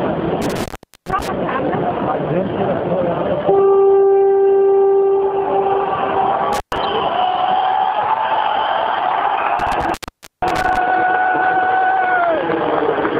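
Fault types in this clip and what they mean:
intermittent contact: The sound cuts out or breaks up with crackle at the edges at 0.42 to 1.28 s, 6.53 to 6.78 s and 9.59 to 10.77 s, open for 411, 120 and 482 ms, as a loose cable or plug briefly opens the connection.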